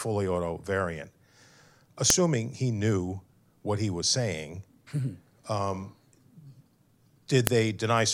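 Joined pieces kept their WAV headers, which play as samples: a file header played as audio snaps sharply at 2.10 s, just before "he knew what he", and again at 7.47 s.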